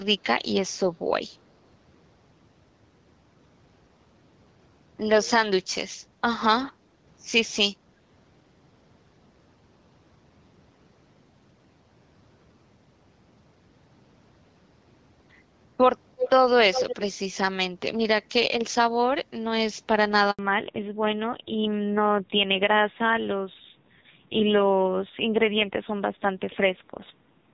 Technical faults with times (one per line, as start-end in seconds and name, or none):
16.19-16.30 echo leak
16.73-17.02 echo leak
20.31-20.39 handover gap
20.39-27.53 fallback to narrowband